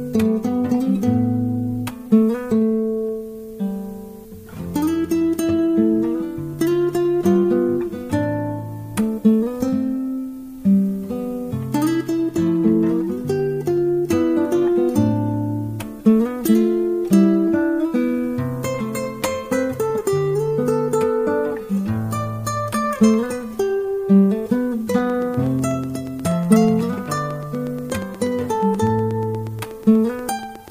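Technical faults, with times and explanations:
24.98–30.69 s, train of clicks: regular ticking about 8.25 per second, roughly fifty, as loud as the sound itself, likely from interference or a faulty connection.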